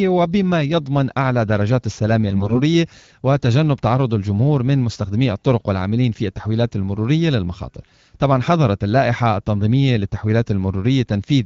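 Speech, carried over an AMR wideband (HD Voice) link whose coding leaves only light artefacts. From 2.30 to 2.61 s there are AMR bit errors. The pitch and level hold roughly steady, but the sound turns hoarse, scratchy and gargly. Bits with weaker protection arrived flipped while the frame checksums still passed. So the decoder placed its excitation pulses wrongly and misread the finer pitch, gain and spectral values. The damage fits an error rate of a few percent.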